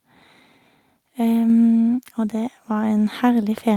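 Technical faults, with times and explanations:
1.50, 2.52 and 3.54 s: microphone volume stepped up, about 2 dB each time, lifting voice and background together; the waveform envelope and spectrogram brightness step up abruptly, roughly once per second.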